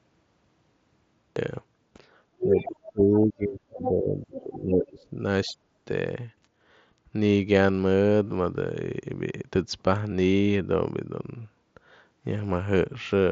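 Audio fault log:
0.00–1.36 s, cut-off start: the clip opens on digital silence, and at 1.36 s the speech appears abruptly, already in the middle of a sound, with a hard edge and no natural onset or fade-in. Capture or streaming began after the talker had started, so the first part of that utterance is missing and the signal jumps straight from silence into the sound.
2.40–2.72 s, 3.82–3.91 s and 4.37–4.42 s, other side's voice leaking through: a second voice is heard under the talker. The first two scraps sit about 5 dB below the talker's speech and the third about 15 dB below. The first lasts about a third of a second, and the others are brief fragments. The likely cause is far-end audio from the device's loudspeaker reaching the microphone and passing the echo canceller without being fully removed.
2.43–5.17 s and 5.46–5.89 s, speech suppressed in double talk: the talker's level dips and breaks up while the other voice is present. 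Roughly two seconds of the first span are affected, with the deepest dip around 25 dB. The second span is about 0.3 s, dropping as much as 40 dB, close to a cut-out. The likely cause is the echo canceller failing to separate near-end speech from the loudspeaker echo while both sides talked, so it attenuated everything. The mSBC headset path keeps the speech band-limited to about 7.7 kHz throughout.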